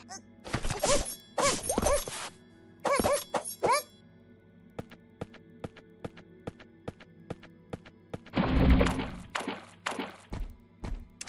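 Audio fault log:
Throughout: resampler restarted on every block. Each 100 ms block is converted in isolation, so its edges lack true neighbouring samples and carry a small error, heard as regular ticks at 10 per second under the sound, consistent with upsampling from 24 kHz to 48 kHz.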